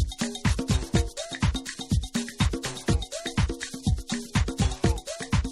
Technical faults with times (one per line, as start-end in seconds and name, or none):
0.00-5.51 crude rate conversion